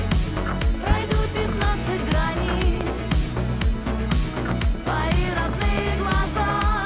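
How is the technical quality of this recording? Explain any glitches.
Four loud pops interrupt the recording, at 0.91–0.94, 2.81–2.85, 4.51–4.55 and 5.78–5.81 s. Each is a single sharp transient peaking about 15 dB above the signal (about 10 dB at 2.81 s), likely from an electrical voltage spike, with the sound continuing underneath. The band limit at 4 kHz points to a G.711 telephone-grade call path.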